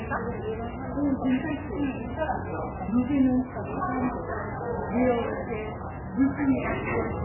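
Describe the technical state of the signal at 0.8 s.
MP3 compression runs through the whole clip, including 0.8 s: nothing survives above 2.9 kHz, and the watery, swirling texture points to a likely very low bitrate around 8 kbps.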